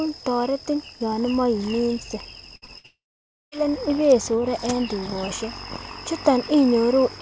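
At 2.56 to 2.64 s comes the first burst of packet loss: about 60 ms of the speech never arrived in time, and the receiver stretched the last sound across the hole, fading it as it went. This makes a short held buzz or hiss, after which the speech picks up further along with that stretch simply gone. It lasts longer than a concealment blip and leaves an audible step where speech went missing.

Straight after, at 2.66 to 2.70 s, a short concealed packet loss covers about 20 ms. The decoder filled it from the preceding sound and blended back into real audio, so it registers only as a brief smear or wobble rather than a held tone. Its brevity sets it apart from the bursts around it.

A second burst of packet loss runs from 2.78 to 2.86 s, again about 60 ms of held, fading sound with the speech resuming further on.

It leads directly into a long network dropout from 2.86 to 3.54 s. The concealed buzz dies away within roughly a tenth of a second, leaving about half a second of silence before speech returns at "ibesore en tukoshek", with around 0.66 s of audio lost. 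The likely cause is a stall in the network that delivered nothing for that stretch. The silence is what separates it from a burst, which stays filled throughout. Throughout, the band stops at 8 kHz, which fits a G.722 call path at 64 kbps.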